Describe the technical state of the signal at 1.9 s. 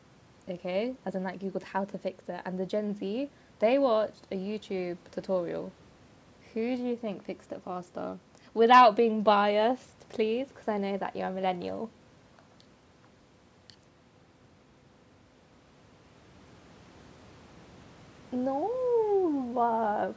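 At 1.9 s the signal is intact, with nothing wrong beyond the normal call microphone processing, which leaves no content above 8 kHz.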